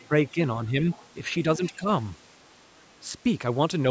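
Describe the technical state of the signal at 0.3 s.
Speech suppressed in double talk is the likely cause of what happens between 0.31 and 0.39 s. With both ends of the call active at once, the echo canceller appears unable to separate the near talker from the loudspeaker echo, so it attenuates everything it hears. The speech dips by roughly 10 dB across around 70 ms of that span before returning at its normal level.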